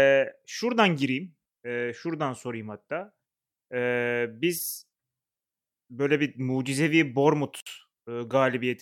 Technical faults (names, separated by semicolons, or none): gap at a join of encoded pieces